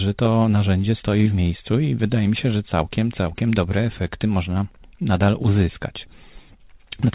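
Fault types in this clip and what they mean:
Clock drift between sender and receiver: the sending clock runs slow, by something like five percent, so the receiver's jitter buffer keeps running short and has to be padded out. This shows as small timing hiccups recurring at uneven intervals across the whole speech clip.
Repeated timing corrections: from 0.09 s to 6.95 s the receiver keeps inserting short repeated pieces, all stretching in the same direction and unevenly spaced. This slows the speech to 96% speed and adds roughly 0.3 s.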